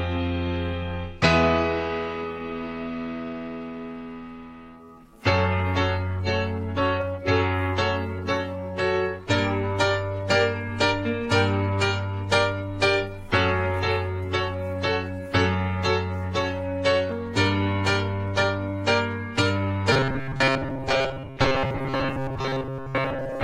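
From 19.92 s to the end at 23.43 s, the audio turns into a robotic sound from repeated short buffers: a rigid 134 Hz buzz, likely from most of the signal being replaced by repeated 7.5 ms chunks, visible as evenly spaced vertical stripes on the spectrogram.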